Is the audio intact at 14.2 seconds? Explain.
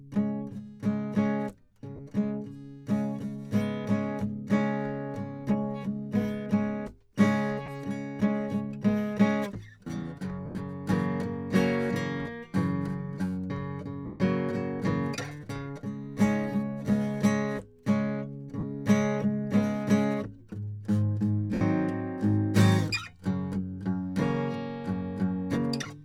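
No. Lost LE Audio frames cut out the music from 14.06 to 14.20 s, about 140 ms, which fits fourteen 10 ms frames. The decoder repeats the last spectrum with random signs and fades it. Tones smear into noise until playback recovers.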